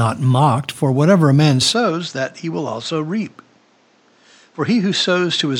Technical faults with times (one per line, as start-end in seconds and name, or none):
1.72-5.60 input switched to a poorer device